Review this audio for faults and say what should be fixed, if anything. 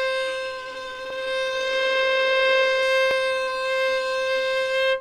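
Overlapping chunks at 1.10 s and 3.11 s: each join replays about 7 ms of sound, producing a click. The waveform shows a brief repeated segment every 2 s. Trim each chunk's overlap, or crossfade it, before joining.

Call bitrate drop from 1.47 s to 2.90 s: the sound turns rough and muffled, which fits the encoder falling from roughly 48 to 16 kbps. On a spectrogram, the upper band cuts off sharply during that span. Smooth the bandwidth estimator and set a higher minimum bitrate for the encoder.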